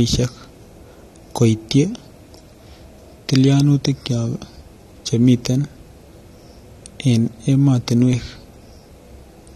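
From start to finish the speech carries plainly audible AAC compression damage: a dull, smeared quality with a warbling, fizzy edge on sibilants and held sounds. Nothing survives above 13.7 kHz. On a spectrogram that shows as a hard ceiling across the whole clip, with patchy holes and blotchy bands below it. The likely cause is an AAC-LC encode at a low bitrate, consistent with about 32 kbps, where quantising against a hearing model discards detail.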